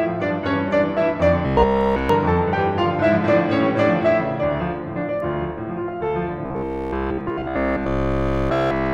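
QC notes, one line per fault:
1.47 to 2.09 s and 6.46 s to the end: robotic sound from repeated short buffers. The music collapses into a rigid, metallic buzz pitched at about 66.7 Hz, with almost none of the real audio coming through. The likely cause is that audio arrived too seldom and the player filled the gaps by looping the last 15 ms slice over and over. Because the loop repeats every 15 ms, it imposes that fixed 66.7 Hz tone.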